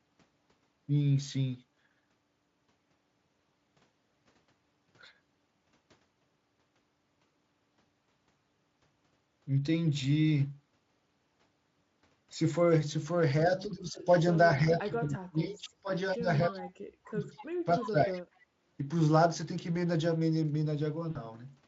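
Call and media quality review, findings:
Speech suppressed in double talk, 13.44–14.17 s: talker level dips during overlap, deepest about 15 dB, roughly 0.7 s affected. Likely echo canceller treating near-end speech as loudspeaker echo and attenuating both.

Same symptom, 14.49–17.25 s: heavier, deepest about 30 dB, around 2 s of speech dipped or cut in pieces. 17.65–18.22 s: milder again, about 15 dB, roughly half a second. Likely the same canceller failing to separate the two talkers.

Echo leak, 17.37–17.46 s: short delayed copy of the voice at 246 ms, about 20 dB under the speech. Likely residual from a speakerphone end not fully cancelled and sent back.

Further scraps at 17.80–17.86 s (about 15 dB down) and 18.14–18.22 s (about 25 dB down), both at the same 246 ms delay. Likely the same leak path. They overlap the 17.65 s suppression.

Background gated by the echo canceller, 18.50–18.54 s: room tone drops for about 40 ms, deepest 8 dB, then recovers. 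The canceller clamps the microphone while the loudspeaker plays and releases it shortly after.

VoIP packet loss concealed by the speech codec, 21.11–21.17 s: about 40 ms of speech replaced by extrapolated, fading buzz or coloured noise, which fits two 20 ms frames. The decoder rebuilt the gap from its last pitch and filter state. Speex coding sits at a high-quality setting, with coding damage faint or absent.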